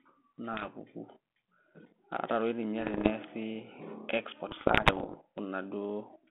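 Bit errors on an ADPCM link hit this band-limited telephone speech at 0.53–0.69 s, 2.81–3.11 s and 4.49–5.16 s. Flipped bits knock the decoder's step size and predictor off track, so each error rings on briefly as pops, rough bursts and momentary level jumps, lasting longest in the final stretch.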